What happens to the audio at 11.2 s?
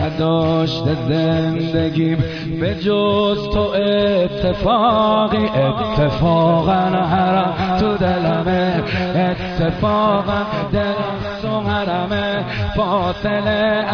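Nothing goes wrong at 11.2 s; the audio plays through that moment intact, with no dropout, click or distortion.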